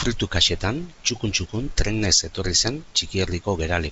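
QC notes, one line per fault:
Nothing stood out on listening to this speech.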